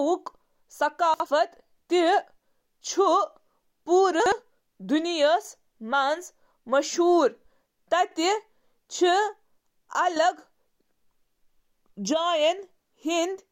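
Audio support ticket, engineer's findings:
Chunks out of order at 1.14–1.26 s and 4.20–4.32 s: a 60 ms chunk plays one slot late, giving a jumbled blip.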